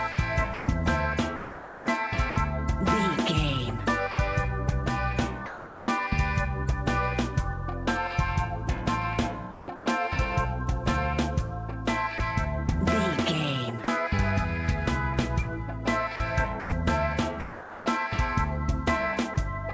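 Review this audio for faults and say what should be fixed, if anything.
Sound chopped by the voice detector, likely from the sender's detector switching transmission on and off repeatedly: from 0.12 to 2.36 s about 780 ms was swapped for comfort noise, from 9.52 to 9.86 s about 260 ms, and from 16.16 to 17.86 s about 620 ms. The sound stutters.

Sound dropped by the voice detector, likely where the detector judged quiet passages to be background and stopped sending: 4.12–4.18 s (60 ms), 5.46–5.88 s (420 ms), 12.18–12.20 s, 13.84–13.88 s and 19.34–19.36 s. In each gap, steady comfort noise stands in for the lost sound until transmission resumes. All of this rides on the G.722 call path, whose band stops at 8 kHz.

Lowering the detector's threshold and adding a longer hangover, or disabling discontinuous transmission for this stream, would prevent both faults.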